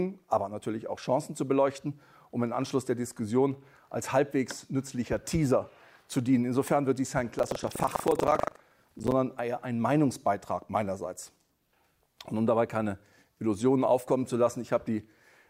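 Buffer tearing between 7.36 and 9.12 s: the writer and reader of the audio ring buffer have drifted and cross inside each period, so about a fifth of every buffer replays audio from roughly a tenth of a second earlier, with hard joins that produce a robotic 25 Hz rattle.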